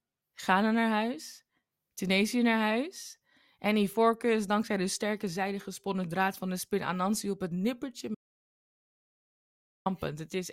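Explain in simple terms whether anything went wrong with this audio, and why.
Right after "op het nippertje", at 8.15 seconds, the speech stops dead and goes completely silent until 9.86 seconds, a gap of about 1.7 seconds. Even the background sound of the room disappears, and then the speech picks up again mid-flow. This is an audio dropout to silence. The likely cause is that the sound input was briefly cut off, so the recording carried on storing pure silence, and whatever was said during that gap is lost.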